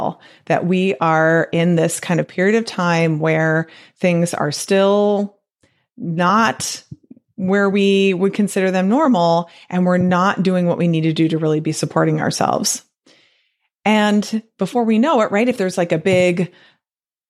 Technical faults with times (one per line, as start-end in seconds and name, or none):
none